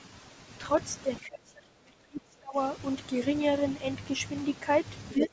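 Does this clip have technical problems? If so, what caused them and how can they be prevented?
Yes. Speech suppressed in double talk occurs from 1.2 to 2.58 s. The voice drops sharply there, by roughly 30 dB at its deepest. A shorter dip of about 15 dB follows from 5.14 to 5.33 s. The likely cause is an echo canceller that could not separate the talker from loudspeaker echo while both sides spoke, so it turned both down. A headset, or an echo canceller with better double-talk handling, would prevent this.

The other side's voice leaking through is heard from 5.21 to 5.28 s. A second voice breaks in, only a little quieter than the talker. It is likely loudspeaker sound that the echo canceller left in the microphone signal. Headphones or a lower loudspeaker volume would keep it out.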